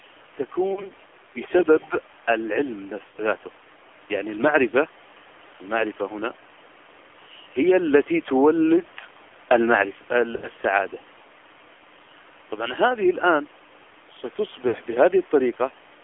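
Throughout, the speech sounds buzzy and synthetic and is confined to about 300 Hz to 3.4 kHz. This is the AMR narrowband mobile codec at 7.4 kbps, rebuilding the voice from a sparse vocal-tract model. Brief warbles and smeared, dipping sound at 0.74–0.93 s, 3.08–3.16 s, 4.70–4.75 s, 10.36–10.47 s and 14.68–14.76 s are lost AMR speech frames, where the decoder stretches its last good settings at falling gain.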